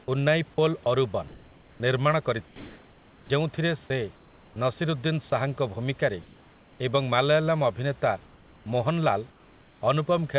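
Speech recorded over a narrowband call path (nothing above 4 kHz, which fits G.711 A-law at 64 kbps) with room noise about 30 dB below the voice. From 0.04 to 3.3 s the sound is chopped by the voice detector. The transmission gates on and off repeatedly, so quiet syllables and word edges give way to comfort noise, about 1.4 s of it in total, which makes the speech sound choppy and unstable. The likely cause is a sender-side voice activity detector under discontinuous transmission, with the receiver generating comfort noise of the RFC 3389 kind. Comfort noise appears in place of the background at 4.16 to 5.32 s (about 0.42 s replaced) and again at 8.26 to 9.82 s (about 0.92 s replaced). In those pauses the textured room noise is swapped for a steady, featureless noise floor, audible as a change in the character of the background rather than a gap. At 5.3 s there is a brief instance of sound dropped by the voice detector. 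Roughly 10 ms of speech is lost and a 20 ms stretch is filled with synthetic noise, likely because the detector briefly took the sound for background.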